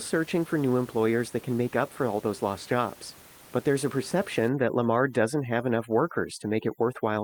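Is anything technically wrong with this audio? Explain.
Yes. From 4.48 s to the end, overdone noise removal sets in: an overly aggressive suppressor zeroes bands near its noise estimate, leaving the background nearly silent with twinkling specks. The room noise, about 23 dB below the speech, drops and breaks up rather than being evenly reduced, and the sudden change partway through separates this from steady codec burbling.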